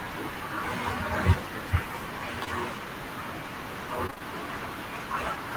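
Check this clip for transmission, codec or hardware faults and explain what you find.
Two transmission faults are audible, both from lost packets.

At 2.44 to 2.48 s there is short concealed packet loss. About 20 ms of audio never arrived. The receiver patched the hole by extending the preceding sound, then blended back. It is heard as a brief smear or wobble.

From 4.06 to 4.22 s there is repeated packet loss, with a robotic sound. Short holes follow one another, the longest about 22 ms. Each is filled by continuing the last sound, so nearly half this stretch is synthetic. It sounds choppy, with pieces missing.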